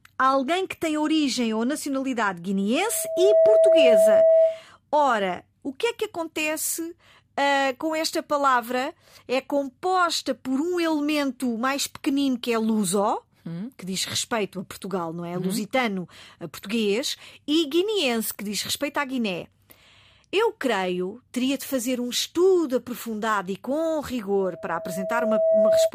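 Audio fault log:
2.79–4.64 s and 24.39–25.91 s, loudspeaker feedback squeal: the microphone is picking up the loudspeaker it drives, and at 650 Hz the loop gain rises above unity, so that frequency keeps recirculating and growing. A steady 650 Hz tone swells over the speech in about half a second the first time, peaking around 10 dB above it, and in about a second the second time, peaking around 5 dB above.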